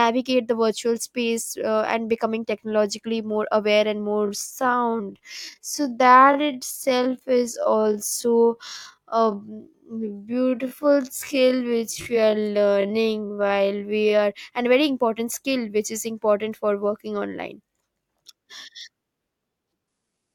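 After the words "technologically more aware and", from 4.07 s to 14.19 s, the speech slows abruptly to about 0.55 times its normal pace. The pitch does not drop with it. This is a time-stretched section. Software likely lengthened the passage by duplicating small pieces while holding pitch steady. Normal pace returns just before "are and very important".

From 19.88 s to the end of the clip at 20.34 s, the quality drops suddenly with no gap in the sound. Codec artefacts rise. This is an adaptive stream at a lower bitrate. The player switched to a much leaner version of the stream when the connection slowed. The sound points to a move from a full-band AAC encoding near 96 kbit/s to a low-rate HE-AAC encoding around 12 kbit/s, where the upper band is rebuilt rather than coded.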